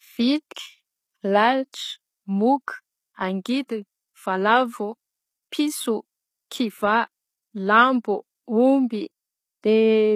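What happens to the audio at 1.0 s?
At 1.0 s, as throughout the clip, the speech carries plainly audible HE-AAC compression damage, which fits a low bitrate around 20 kbps. The treble is likely copied upward from lower bands, so s sounds turn gritty and lispy, and a spectrogram shows repeated, mismatched high-band patches.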